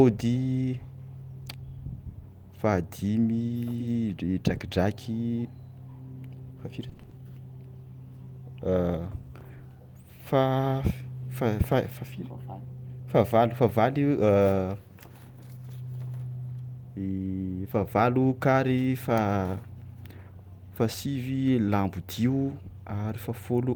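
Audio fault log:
6.89–7.13 s repeated packet loss (robotic sound): six gaps up to 20 ms, each filled by repeating prior audio, sound choppy; spectrogram shows copied, striped frames.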